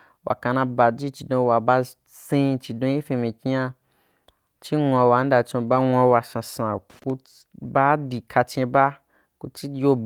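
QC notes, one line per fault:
5.67–5.77 s, lost packet rebuilt from error correction: a short patch, about 60 ms, of rougher, noisier speech with no gap, played from low-bitrate backup copies, pointing to three lost packets.
6.90–7.10 s, loose connector crackle: just after "wa sasan", an irregular burst of scratchy crackle as a worn contact rapidly breaks and remakes the signal path, chopping the audio.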